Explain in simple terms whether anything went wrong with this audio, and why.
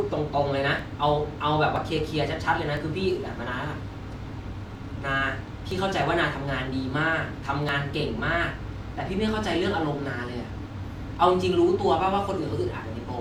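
Yes, something slipped. There's an overlap between stream segments. The audio arrives in one-second chunks, and where two chunks claimed the same few instants, the player trimmed roughly 35 to 40 ms of speech that wasn't actually duplicated. You hear a tiny click or skip at 0.79–0.83, 1.76–1.80, 2.77–2.81, 4.75–4.79, 5.71–5.75, 6.72–6.76 and 7.69–7.72 s. They fall about once a second, matching that chunk size.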